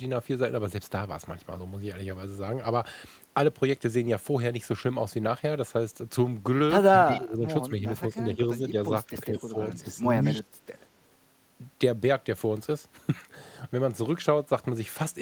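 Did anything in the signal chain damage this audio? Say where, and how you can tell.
Yes, in call processing. Speech is suppressed in double talk at 6.93, 7.67, 8.11, 8.6, 9.07, 9.73 and 10.33 s, with dips of about 5 to 20 dB. This is likely an echo canceller turning down overlapping talk. The level sags rather than cutting to silence as packet loss would.

Echo leak appears at 7.16 s as a faint copy about 20 dB down and 181 ms late. This is likely the far end's loudspeaker pickup getting past its canceller. It is a distinct delayed repeat, unlike room reverb's continuous smear.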